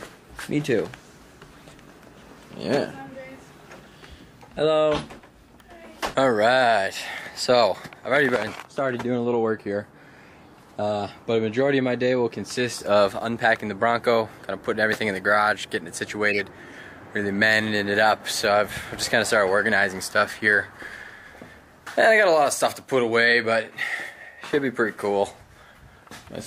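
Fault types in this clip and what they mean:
Corrupt frame decoded: Flipped bits in the compressed stream were played back as if valid. Misread gains and codes put energy at the wrong frequencies. From 16.29 to 16.40 s, about two frames long, a glitch peaking near -10 dBFS cuts across the sound.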